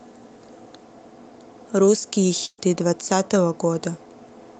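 From 2.45 to 2.62 s, a burst of packet loss drops about 120 ms of speech. The last sound is stretched and fades, then goes briefly silent, unlike a clean cut.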